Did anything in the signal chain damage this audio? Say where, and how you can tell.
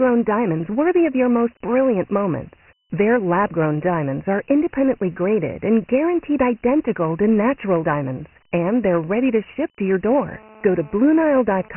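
Yes. The codec stage did: the whole recording has the gritty hiss and hard 3 kHz ceiling of Dialogic VOX ADPCM. Heavy 4-bit step quantisation at 6,000 samples a second, which fits about 24 kbps, leaves grit trailing every syllable.

Then the analogue wiring picked up GSM phone buzz from 10.13 to 11.69 s, right after "ship to your". It's a raspy 217 Hz buzz with lots of harmonics, about 26 dB under the speech. It comes and goes, so a nearby phone was pushing data, and the circuit was rectifying the radio bursts.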